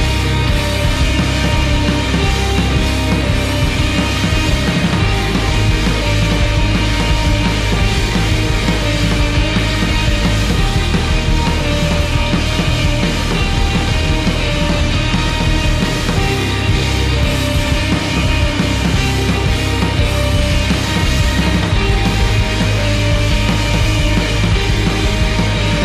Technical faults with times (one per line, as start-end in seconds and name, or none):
none